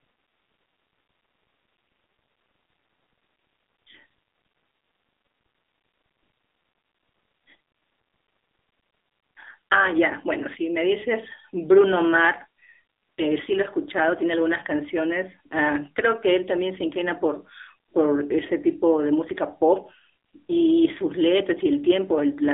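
From start to finish the speech has passed through the AMR narrowband mobile codec: nothing survives above 3.8 kHz, the band sits around 300 Hz to 3.7 kHz, and the buzzy, synthetic edge is plainly audible, which fits a low mode near 7.4 kbps.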